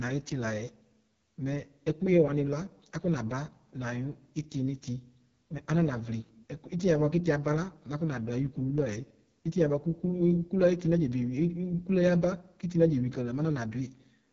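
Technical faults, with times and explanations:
Throughout, AMR wideband (HD Voice) codec: rough, raspy speech from a pulse-driven vocal-tract model starved of bits, fitting a rate near 6.6 kbit/s; nothing above 7.3 kHz.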